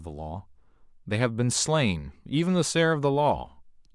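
No technical faults can be heard in the speech recording, which holds steady from beginning to end.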